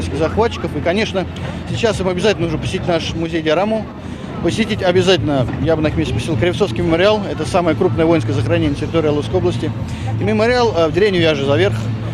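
No technical faults can be heard in this clip.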